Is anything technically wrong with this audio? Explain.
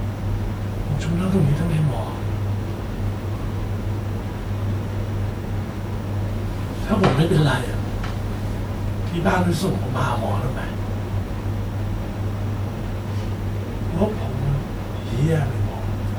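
Yes. Throughout the speech there are signs of transcoding between lossy codecs, likely an MP3 encode at around 92 kbit/s re-encoded as WMA 1 at around 96 kbit/s. The second codec spends bits on the first codec's artefacts and adds its own, so both codecs' artefacts are heard together. A spectrogram shows nothing above 20.1 kHz and speckled, patchy high-frequency detail.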